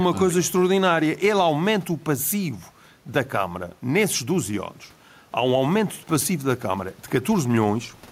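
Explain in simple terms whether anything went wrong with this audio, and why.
Something did go wrong, and it lasts the whole clip. The fault is gain pumping. There is faint room noise in the background. The loud and quiet parts of the speech sit unnaturally close together, so the voice sounds squashed. The swing is modest. The likely cause is a microphone level set far too high, with an automatic limiter quickly pulling it back down.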